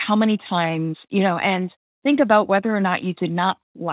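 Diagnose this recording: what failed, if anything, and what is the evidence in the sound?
Nothing here has failed: the speech simply carries the narrow, telephone-style band of a call path, with nothing above 4 kHz, which fits an ordinary 64 kbps G.711 mu-law link doing its normal job.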